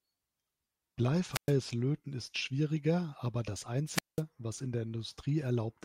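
At 1.31 s the speech cuts out in a wireless microphone squelch dropout lasting until 1.53 s. A brief rise of hiss comes first, then about 113 ms of near silence. The analogue FM radio link has faded so far that the receiver's squelch mutes its output. A second dropout runs from 3.92 to 4.22 s, just after "ist schwieriger aber das". This time the hole lasts about 193 ms before the speech returns at "was in der".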